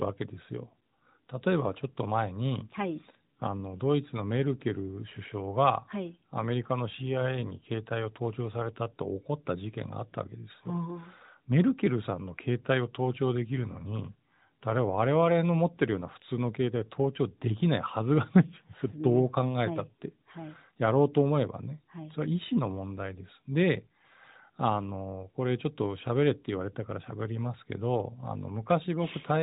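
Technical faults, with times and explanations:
No technical faults are present: the speech carries the narrowband sound of the AMR-NB mobile codec, with nothing above 4 kHz and only light coding colour consistent with its highest 12.2 kbps mode.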